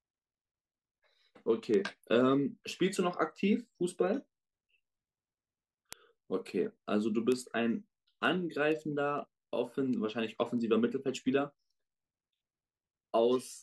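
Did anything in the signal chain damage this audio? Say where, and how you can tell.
Yes: word clock ticks at the digital link. An unlocked receiver clock slips one sample about every half second, producing steady ticks from 0.35 to 13.37 s.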